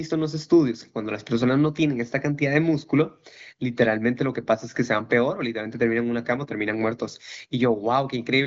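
No technical faults are audible.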